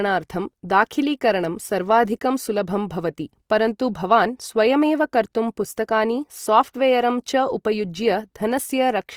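Opus compression damage runs through the whole of this speech recording and is plainly audible. The band stays full, reaching up to about 20.3 kHz, yet the voiced sounds come across rough and grainy, with a noisy texture where clean harmonics should be. That points to the encoder's music (CELT) mode starved of bits, which fits a rate near 24 kbps. It keeps each band's energy but fills the missing detail with folded or noise-like content, so there is grit rather than swirling gaps. That is the likely cause.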